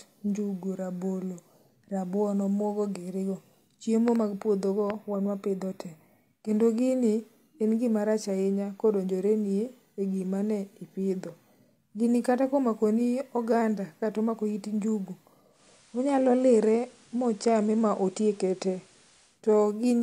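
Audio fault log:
4.08–4.18 and 4.90–4.92 s, loud pop: two quick pops just before "mag puodho go wan", then one before "wan wapidho te kendo", each about 10 dB above the speech. The speech continues through them, unlike a dropout. This is likely a voltage pulse from a plug, switch or static.
15.49–19.42 s, digital radio blending to analogue: after "kata omako it njugu" the audio cross-fades over 194 ms to the FM broadcast. Hiss rises to roughly 35 dB below the speech, and level shifts about 1 dB. The gradual crossfade sets it apart from a hard cut.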